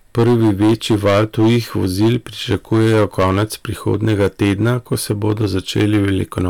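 From start to finish the speech is driven about 10 dB past what a stage in the chain can pass, so hard clipping cuts the loudest peaks flat, a few percent of all samples. Those squared tops add high harmonics, heard as a harsh fuzz on every louder syllable.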